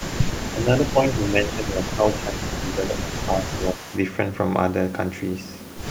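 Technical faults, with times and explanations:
0.0–0.64 s, 0.81–1.79 s, 2.1–2.16 s and 2.38–3.98 s: echo leak. A faint copy of the speech returns 178 ms late, roughly 25 dB below the talker, in scraps and longer stretches. This is likely a far-end loudspeaker whose echo canceller let some of its microphone pickup back down the line.
0.52–3.86 s: speech suppressed in double talk. During overlapping talk the speech dips in pieces, by about 10 dB at the deepest, for around two seconds in total. The likely cause is an echo canceller that could not tell its talker from the echo and turned both down.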